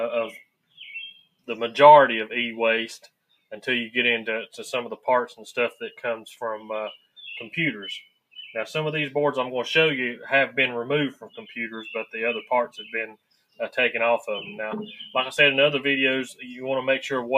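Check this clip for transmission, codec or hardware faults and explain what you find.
There is one processing fault, present throughout, plus seven moments where it bites much harder.

Across the whole clip, held material and tails pump and thin out by a few decibels while attacks pass. This is a noise suppressor applied to music or sounds, mistaking steady content for noise.

At 0.43 to 0.78 s, 1.19 to 1.48 s, 6.97 to 7.17 s, 8.05 to 8.37 s, 11.14 to 11.38 s, 12.69 to 12.92 s and 13.12 to 13.59 s, the sound sinks for a fraction of a second, by about 12 to 21 dB. This is sound cut by the noise suppressor, which clamps sustained portions hardest.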